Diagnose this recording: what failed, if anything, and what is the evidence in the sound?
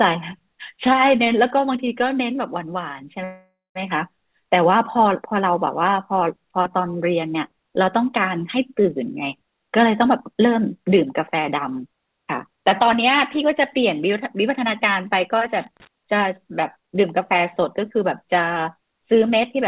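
Network and jitter buffer: a call audio freeze runs from 3.24 to 3.78 s. The sound smears into a fading buzz, then about 180 ms of silence, and resumes where it stopped. Nothing is lost, unlike a dropout. The likely cause is late packets draining the buffer, adding roughly half a second of delay.

Jitter buffer: jitter buffer speed-up occurs from 9.85 to 10.86 s at 108% speed, trimming about a tenth of a second, and from 16.77 to 19.57 s at 110%, trimming about a third. The speech sounds hurried but keeps its pitch, which rules out a sample-rate mismatch.

Analogue wiring: loose connector crackle occurs from 15.58 to 15.87 s, a ragged burst of scratching as a contact makes and breaks. The irregular spacing separates it from digital clicks, which tend to be evenly spaced, and it sits on top of the narrowband call audio, which has nothing above 4 kHz.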